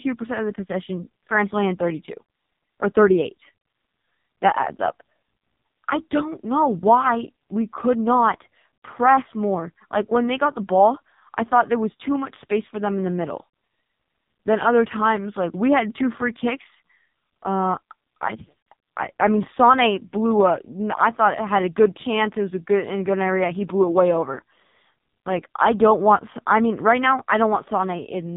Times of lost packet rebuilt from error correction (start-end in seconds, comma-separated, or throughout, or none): none